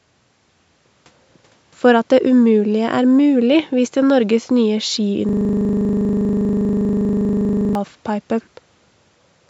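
From 5.29 to 7.75 s the speech turns into a steady 25 Hz buzz as one 40 ms slice repeats. This is a system hang loop replaying a frozen buffer.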